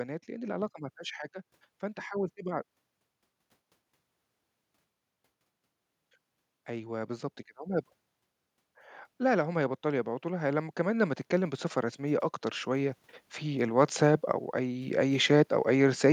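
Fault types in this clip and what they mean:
automatic gain rising: from 9.18 to 16.06 s the gain control, finding input too quiet, lifts level about 12 dB, so speech and background swell together.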